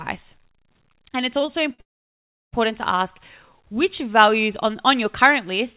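At 1.46 s and again at 1.74 s, a late packet emptied the jitter buffer, causing a short stall: the receiver held the last sound for about 16 ms, then 49 ms, before resuming. At 1.81 s a call audio freeze follows, likely from packets held up in transit. The stretched sound dies away into roughly 0.7 s of silence, and the audio picks up at 2.55 s from where it stopped. Throughout, the narrowband call path leaves nothing above 4 kHz, which fits a 64 kbps G.711 A-law codec.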